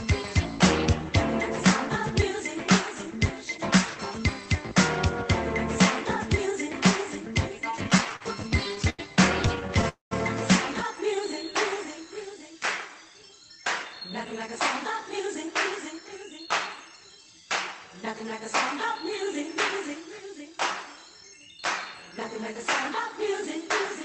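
From 7.71 to 9.01 s the audio stutters in repeated stalls. Packets arrived late, so the jitter buffer kept running dry. About 16 short gaps were filled with continued sound, 272 ms in all, the longest 90 ms. A lighter burst follows from 9.47 to 9.85 s, with six tiny gaps of 12 ms or less.

At 9.89 s there is a call audio freeze lasting until 10.13 s. The buffer likely ran empty after packets were held up in transit. The last sound is stretched, then fades, leaving about 140 ms of silence. Nothing is lost, but the delay grows by 225 ms.

From 11.16 to 12.06 s a jitter buffer slow-down drags the sound to 91% speed. The receiver repeated single pitch periods to rebuild its reserve, adding 82 ms. Pitch stays the same, but sounds are drawn out.

From 13.85 to 17.05 s a jitter buffer speed-up runs the audio at 109% speed. The receiver trimmed short pieces to cut excess delay, about 0.3 s in total. 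The pace sounds hurried while the pitch holds steady. Throughout, the call codec's coding noise and its cutoff near 8 kHz remain audible.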